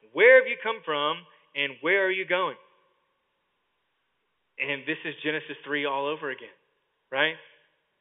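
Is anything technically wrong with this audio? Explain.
No, nothing is technically wrong with this audio; the speech comes through G.711 telephone coding working as it normally does.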